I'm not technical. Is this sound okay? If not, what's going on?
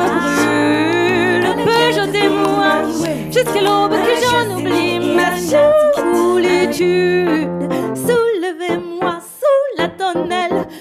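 Yes, this sound is okay. Nothing in it needs fixing.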